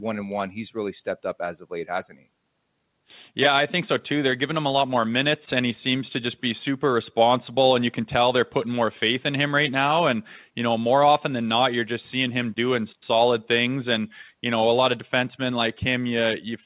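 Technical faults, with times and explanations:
No technical faults, with times and explanations, are present in this speech, which reaches only about 4 kHz as a narrowband call path carries it.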